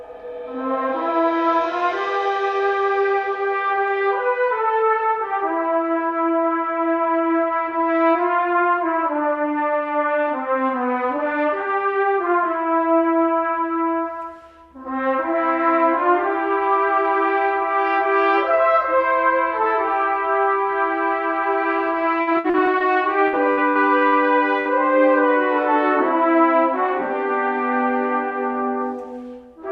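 From 22.21 to 22.85 s the stream suffers repeated packet loss: four separate gaps where packets failed to arrive in time, the longest 57 ms. Each time the receiver papered over the hole by extending the last stretch of sound, 163 ms of fill in all, so about a third of that span is synthetic. What remains is choppy, with 60 ms of real audio simply gone.

Near the end of that stretch, from 22.79 to 22.83 s, the receiver skips ahead. With later audio already queued, it dropped a chunk of roughly 70 ms and cut its playout delay by around 50 ms. Only 11 ms of fill bridges the join, so the sound lurches forward, with the material on either side butted almost directly together.

A second bout of repeated packet loss runs from 23.28 to 24.15 s, this time with five gaps, the longest 61 ms. Concealment supplies 246 ms, about 28 percent of the span, while 180 ms of genuine audio is lost. The texture again turns stuttering, with audible pieces missing between the patched fragments.

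At 24.60 to 24.68 s a burst of packet loss removes 60 ms in one go. The receiver holds the last sound for 50 ms and fades it, producing a brief smeared buzz or hiss before playback picks up further along.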